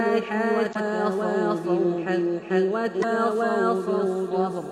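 From start to end, every sound arrives twice. A doubled audio track runs the whole way through. A second full-band copy trails by roughly 0.4 s at about the same level. It is dry, with no decay or room colour. It is likely a second, slower capture path mixed in with the first.

At 0.71 to 0.76 s a short glitch cuts through. This is damaged data in a compressed stream. The decoder misread corrupted frames and lost sync while hunting for the next header. The same blip returns at 2.99 to 3.04 s.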